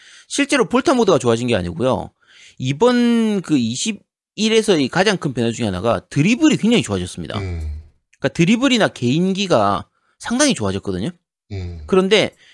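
Nothing in the recording stood out as a technical fault on listening.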